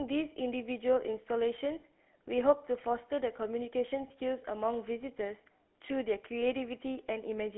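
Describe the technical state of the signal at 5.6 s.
At 5.6 s the speech carries GSM full-rate codec damage, present throughout: pulse-driven vocal-tract modelling leaves a buzzy, gravelly roughness, band-limited to roughly 250 Hz–3.5 kHz, consistent with 13 kbps.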